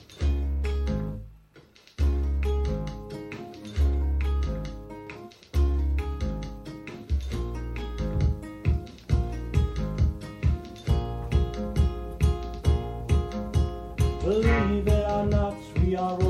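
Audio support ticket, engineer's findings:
Video or display buzz from 7.99 s to end of clip. 60 Hz field-rate buzz with hash above it, roughly 25 dB below signal. Probable component: screen or video cable coupling into audio path. Check cable routing and shielding.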